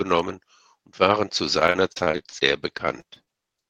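From 1.59 s to 3.39 s the speech breaks up into repeated packet loss, giving a robotic sound. Short dropouts arrive one after another across the whole span. Each hole is filled by stretching the preceding sound forward, and the longest hole lasts about 41 ms. Patched audio covers roughly a fifth of the stretch. The repair cannot recover everything, so some pieces simply vanish. The result is choppy and robotic, with a mechanical texture.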